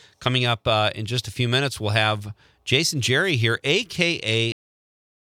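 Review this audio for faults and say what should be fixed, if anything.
Cut-off end at 4.52 s: the sound stops mid-event and drops straight to digital silence with no decay, which holds until the clip ends at 5.23 s. The final buffers were never written, so the tail was lost. Prevent it by flushing and draining all pending buffers before closing the file or stream.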